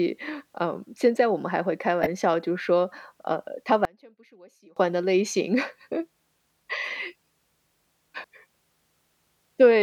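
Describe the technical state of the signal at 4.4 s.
At 4.4 s the speech drops by about 31 dB between 3.85 and 4.77 s, leaving a faint trace. The likely cause is one channel inverted, so the shared centre cancels when summed to mono. The waveform collapses and the spectrogram fades.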